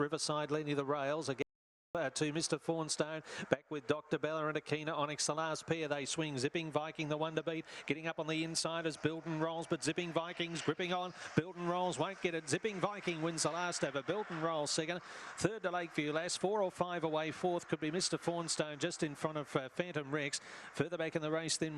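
At 1.42 s the sound cuts to total silence for 0.53 s, an audio dropout to silence, likely a lost input link, before resuming at 1.95 s.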